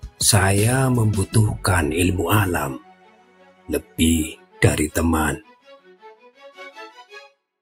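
Across the whole clip the level pumps and flutters, with sustained parts and decaying tails sinking by roughly 10 dB while sharper onsets hold up. This is a noise suppressor applied to music or sounds. A processor tuned for speech reads steady tones and ambience as background noise and keeps pulling them down, so the balance keeps shifting instead of following the material.

Four spots stand out as sound cut by the noise suppressor. The first is at 0.03 to 0.2 s, a brief dip of about 11 dB. The longest stretch is 2.79 to 3.98 s, where about a second of held sound sinks by about 12 dB. Another short dip of about 12 dB comes at 4.36 to 4.59 s. Finally, 5.43 to 6.41 s loses about 11 dB over most of that span. In each case the suppressor judged the steadier or fading content to be noise and attenuated it well below its surroundings, leaving those moments thin and hollow.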